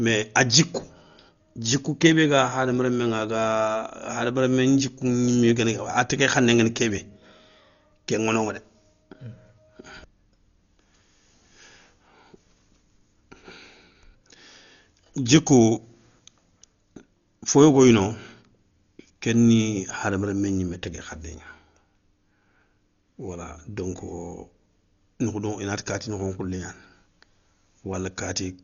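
Throughout the speech the sound is dull and boxed-in, with nothing above about 6.9 kHz, and a rough, fluttering noise clings around the tonal parts. The damage is heavy, and the likely cause is Dolby Digital compression at a very low bitrate, which fits something near 40 kbps. Starved of bits, the encoder narrowed the band and left many frequency lines without mantissa data, so the decoder filled those gaps with dither noise.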